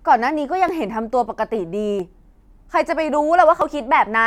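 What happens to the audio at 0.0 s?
Nothing goes wrong at 0.0 s; the audio is intact at that moment.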